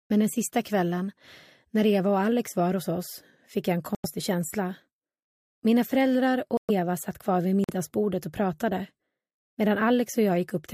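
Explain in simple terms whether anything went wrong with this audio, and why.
Three short gaps of silence cut into the sound, at 3.95 to 4.06 s, 6.57 to 6.71 s, and 7.64 to 7.70 s. This is corrupt frame muted. Damaged chunks of compressed data were rejected by the decoder, so the player filled each hole with silence. Timing stays intact.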